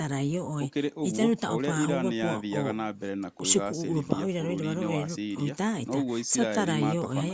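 Nothing in the speech recording points to a technical fault. The call microphone processing is audible in the trimmed lowest bass and in a top end that stops at 8 kHz, as expected for that path.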